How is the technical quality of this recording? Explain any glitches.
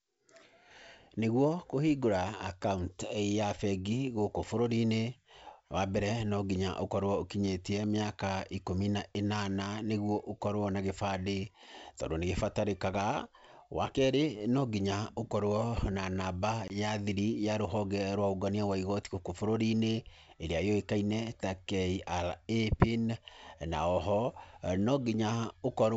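The speech has one glitch, a packet loss on an ADPCM call between 16.68 and 16.75 s. About one packet, some 20 ms of audio, never arrived and was filled with silence, leaving a hard-edged gap. Because each ADPCM sample is coded as a change from a prediction, the receiving decoder's predictor and step size no longer matched the sender's once the stream resumed. Speech comes back with brief distortion, settling within a few tens of milliseconds. The G.722 wideband coding at 64 kbit/s carries the sound up to 7 kHz with at most a faint upper-band hiss.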